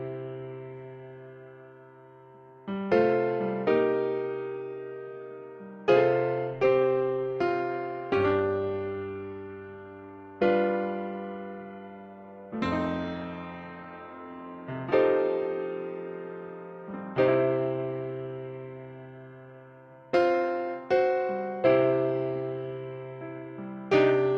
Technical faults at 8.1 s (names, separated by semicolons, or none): none